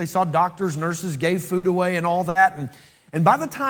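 Speech with two bursts of packet loss, at 1.57–1.66 s between "saw doctors nurses gave" and "away and all", and at 2.29–2.38 s just after "away and all". In each, the receiver stretched and faded the last sound for about 60 ms, about 60 ms of audio is missing, and the spectrogram shows flat, smeared bands before the abrupt resumption.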